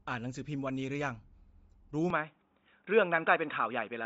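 From the start, the audio shows Bluetooth LC3 compression, likely the cause of the coarse, grainy upper band heard throughout. The codec zeroes much of the upper spectrum and fills it with noise, so the voice takes on a breathy, gritty edge, and nothing remains above 7.7 kHz. The damage is plainly audible, and the character fits a low LC3 bitrate around 32 kbps with 10 ms frames.

At 2.10 s the system switched its input to a poorer device, likely a different microphone or a headset's call profile, and that path carries the speech to the end. The new device passes a much narrower band, with nothing above 3.8 kHz, so the sound turns abruptly dull and boxy at the switch. There is no gap at the changeover and no noticeable jump in loudness. The new device adds only a very faint background noise, far below the speech.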